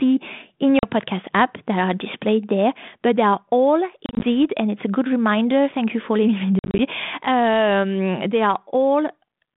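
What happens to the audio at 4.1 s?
Packet loss on an ADPCM call from 4.06 to 4.27 s, after "but they are all": about 90 ms of short silent gaps scattered across 160 ms, the longest 30 ms. The decoder's predictor loses sync each time, so the speech returns slightly distorted before settling within some tens of milliseconds, leading into "and it's a good".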